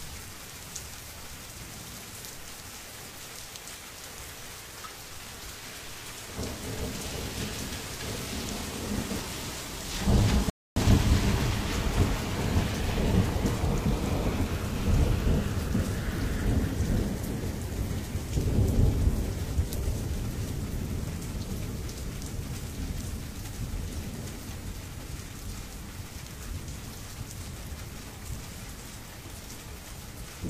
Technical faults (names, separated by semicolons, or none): rebuffering stall